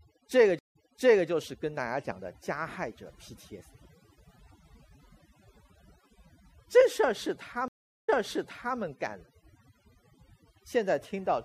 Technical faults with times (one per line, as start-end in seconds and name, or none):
0.00-11.44 overdone noise removal
0.59-1.28 stream reconnect
7.68-8.77 stream reconnect